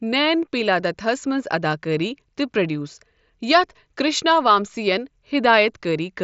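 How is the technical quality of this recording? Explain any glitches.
No glitches can be heard.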